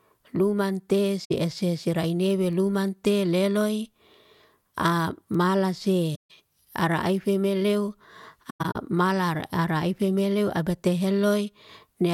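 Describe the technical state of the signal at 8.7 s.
At 8.7 s there is AAC frame loss with muting (8.49 to 8.76 s). Zeroed frames leave scattered gaps with soft, faded edges, not the abrupt click of a hard dropout.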